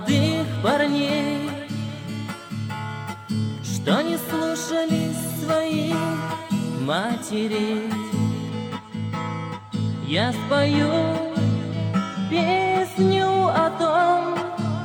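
From 8.50 s onward, channel delay (comb filtering): one channel lags, fitting a two-sample offset, so the mono sum notches around 10 kHz, dulling the top.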